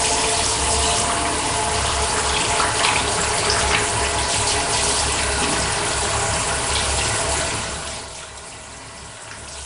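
From start to finish the sound carries a rough, hissy halo with a smeared, underwater quality, and nothing comes through above about 10.6 kHz. That points to Nellymoser compression at a low rate, likely around 44 kbps, where quieter bands are swapped for filler noise.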